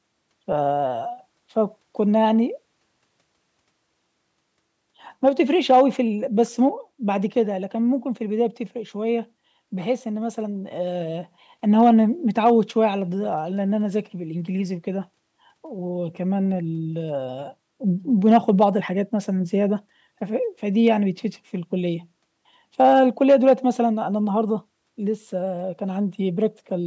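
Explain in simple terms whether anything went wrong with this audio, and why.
Hard clipping: at a few loud moments the speech was bigger than the recording chain could hold, so the tops of the waveform were sliced flat. That adds a brief harsh crackle at 5.27–5.82, 11.79–11.90, 12.45–12.51, 18.26–18.65, 20.87 and 22.80–23.53 seconds.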